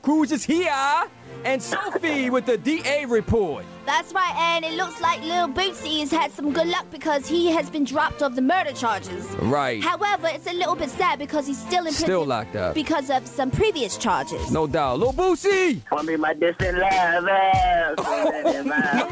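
No technical faults are audible anywhere in this recording.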